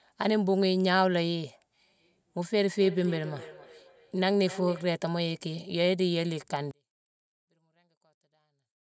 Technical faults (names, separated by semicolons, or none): feedback echo between two devices; one channel inverted